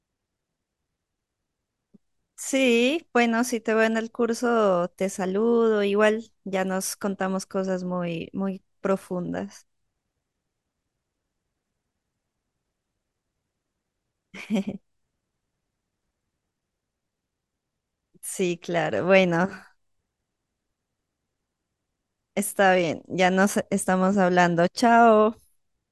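No technical faults are audible.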